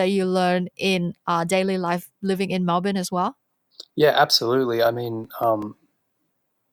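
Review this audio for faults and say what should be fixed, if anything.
CD scratch ticks appear in this speech between 4.86 and 6.00 s: seven regularly spaced clicks, the longest about 2 milliseconds, where a scratch defeats error correction on every disc rotation. On a spectrogram they show as thin vertical broadband lines; on the waveform they show as brief flattened notches. Re-rip from a clean or polished disc using a secure-ripping tool that rereads damaged sectors.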